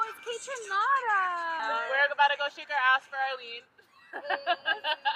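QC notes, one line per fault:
1.59–1.61 s, skip ahead: Audio that was already queued was thrown away, either lost in transit or discarded when the jitter buffer overflowed, and playback resumed with later material. With nothing filled in, roughly 0.4 s of sound is missing and the two edges are butted together almost seamlessly. The sound lurches forward abruptly rather than pausing, and the delay drops by a similar amount in that instant.
1.73–3.61 s, jitter buffer speed-up: The jitter buffer was still holding more audio than its target, so the receiver trimmed short slices of one or a few pitch periods again and again to draw the delay down. Across these nearly two seconds the sound plays at about 109% speed while the pitch stays the same, and roughly a fifth of a second is removed in total. The result is a hurried, rushed quality with no change in tone.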